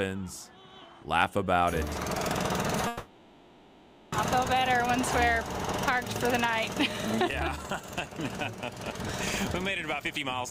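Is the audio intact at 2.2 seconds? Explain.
Yes, the audio is intact at 2.2 seconds, with no fault present at that moment.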